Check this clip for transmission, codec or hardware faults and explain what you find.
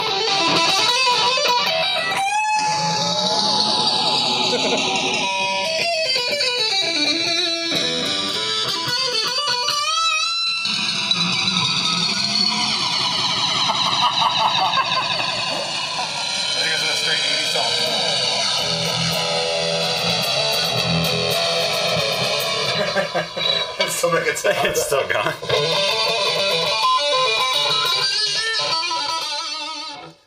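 There's one fault, the channels drifting apart, throughout: two separately clocked devices, around 70 ppm off, let inter-channel delay creep to about 2 ms, so mono sums sound like slow flanging.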